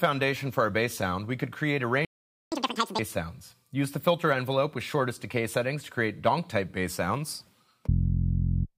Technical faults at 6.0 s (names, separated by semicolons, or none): none